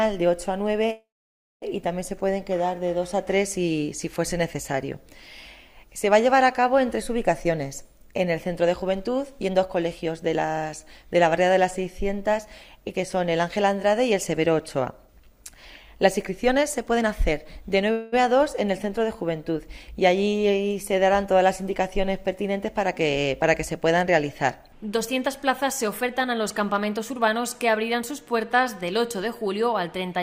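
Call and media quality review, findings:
Call audio freeze, 0.91–1.64 s and 17.92–18.14 s: last sound held as a fading buzz, the first going silent for about 0.57 s. Audio resumes intact with nothing skipped. Likely jitter buffer underrun.

Jitter buffer speed-up, 8.64–10.46 s, 15.03–15.54 s, 15.96–17.91 s and 24.95–28.43 s: audio hurried 7–21% at unchanged pitch. Pitch-period cuts drain the excess buffer, unlike resampling, which would shift pitch.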